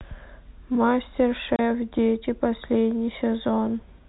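At 1.56 s the speech drops out for 30 ms, ending at 1.59 s. This is packet loss filled with silence: one packet went missing, and the receiver played nothing in its place. The hole has hard edges. The audio stays limited to the telephone band throughout.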